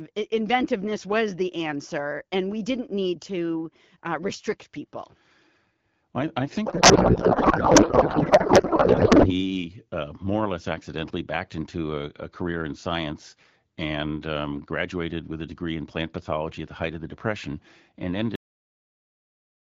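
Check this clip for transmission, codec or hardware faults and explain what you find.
Two faults stand out in this speech clip.

From 6.66 s to 9.33 s there is a codec payload misread. It begins right after "I I" and clears before "uh more or less". The packing of the AMR bits was misunderstood. Octet-aligned frames were read as bandwidth-efficient ones, so every field sat in the wrong place. The decoder still accepted the frames. The speech is replaced by garbled noise and warble that barely tracks it. The underlying AMR wideband coding sounds clear, which fits a rate of about 12.65 kbit/s.

At 18.36 s there is a cut-off end. The audio stops mid-sound and drops straight to digital silence. There is no decay tail. The final buffers were never written or played, so whatever was sounding is simply truncated. The silence holds from that point to the end of the file. It is an abrupt edge, not a fade.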